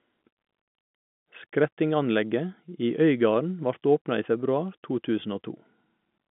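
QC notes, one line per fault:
No faults are heard in this speech clip. It carries the normal sound of G.711 telephone coding, with the line band running from about 150 Hz to 3.5 kHz and nothing present above 3.7 kHz.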